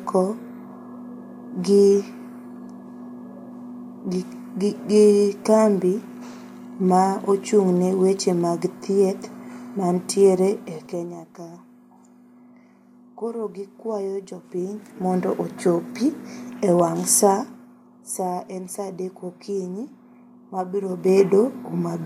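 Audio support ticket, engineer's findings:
Zipper noise, 14.49–15.23 s and 20.71–21.18 s: ticking over the speech as level moves roughly 15 dB then 10 dB. Gain applied in unsmoothed 2 dB steps, around ten per second.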